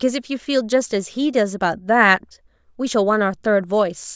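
No technical faults can be heard anywhere in the speech recording; the signal stays intact and steady throughout.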